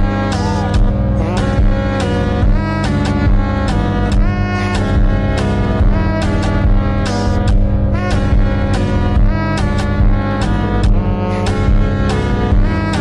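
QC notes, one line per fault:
Throughout, mains hum: a steady low tone at 50 Hz runs under the whole clip, loud enough that it sits only about 5 dB below the wanted sound and competes with it instead of hiding beneath it. The power-line frequency is leaking into the signal path, most plausibly through a ground loop between connected equipment or magnetic pickup from a nearby transformer, and the low harmonics riding on the fundamental give it that characteristic buzzy drone.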